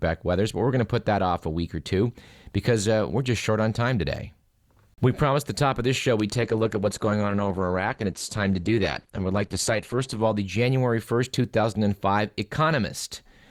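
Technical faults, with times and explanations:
6.35–10.35 s, adaptive stream at a lower bitrate: just after "of this show we'd", quality drops suddenly for four seconds and then recovers, with no gap. Codec artefacts rise, which points to the stream falling from about 64 to 16 kbit/s Opus when the connection slowed. On a spectrogram, the high band thins and goes blocky between two sharp vertical edges, beneath the clip's 17.2 kHz ceiling. The waveform stays continuous.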